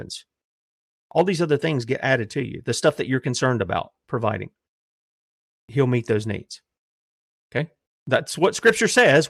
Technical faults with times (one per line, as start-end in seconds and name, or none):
none